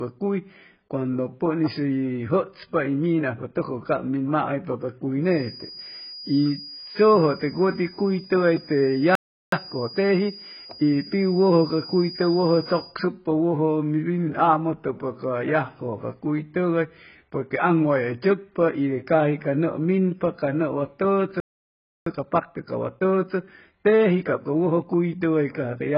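Throughout, the speech sounds dull and smeared, with a fizzy, warbling edge on sibilants. This is heavy AAC compression, likely AAC-LC at a very low rate, which fits roughly 12 kbps. A spectrogram shows a lowered cut-off and patchy, holed bands below that.

From 5.20 s, right after "cab maaypa ca cuy", a thin feedback whistle at 4.9 kHz sits well beneath the speech until 12.99 s, swelling and fading slowly. It is likely a speaker-to-microphone loop hovering at the edge of oscillation. On a spectrogram it appears as a single bright horizontal line.

At 9.15 s a playback stall cuts the sound dead for 370 ms, likely because the player starved for data. The waveform shows a flat gap. Time-compressed catch-up follows from 9.52 to 11.00 s. The player plays at 1.25 times speed by trimming and cross-fading short segments, so the speech is hurried at its normal pitch. The waveform shows denser syllables without a shift in pitch.

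A second playback stall at 21.40 s silences the output for 662 ms, likely from the same data shortage, and leaves a longer flat stretch in the waveform. Time-compressed catch-up then runs from 22.06 to 25.06 s at 1.15 times speed. It sounds gently rushed.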